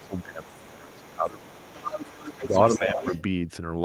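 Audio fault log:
0.00–1.94 s, 2.36–2.55 s, 2.79–3.13 s: speech suppressed in double talk. The echo canceller likely turned everything down while both sides spoke, so the speech dips about 20 dB early, then about 10 dB.
0.00–3.22 s: other side's voice leaking through. Echo cancellation likely left loudspeaker sound in the microphone signal, so a second voice runs underneath, around 15 dB below the talker.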